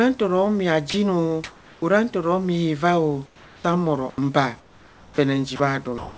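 At 0.90 to 0.94 s, right after "ntaro mia", the speech drops out for 40 ms and a flat hiss fills the gap. This is sound dropped by the voice detector: the sender likely judged that trailing, quiet stretch of speech to be background and stopped transmitting, so the receiver played comfort noise instead. Unlike a packet-loss gap, there is no concealment smear or repeated fragment. The real sound simply gives way to steady noise and then returns.

From 1.44 to 1.82 s, leading into "ntoro mia", the pause carries comfort noise in place of the background. For 380 ms the room's actual noise floor, which sits about 30 dB below the speech and is heard under the G.722 band limit of 8 kHz, is replaced by a smooth synthetic hiss. This is the likely result of discontinuous transmission, with the receiver generating noise from occasional level updates. The synthetic noise sits about 27 dB below the loud parts and only about 1 dB off the real background, so the level barely changes. 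What gives it away is the texture: the real background has detail, and the fill is even and featureless.

At the end of that pause, from 1.80 to 1.82 s, the onset is clipped by the voice detector. The detector was likely slow to register that speech had resumed, so the first 20 ms of "ntoro mia" never arrived and comfort noise covered them. The word bursts in hard, without its soft attack. This differs from the earlier dropout, which fell after a word rather than at a word's start.

From 3.26 s to the end, the sound is chopped by the voice detector. The detector likely flipped repeatedly between sending and muting, and about 1.3 s in total was swapped for comfort noise. Quiet syllables and word edges vanish intermittently. This repeated switching, rather than one clean gap, is what separates it from the single dropout near 0.9 s.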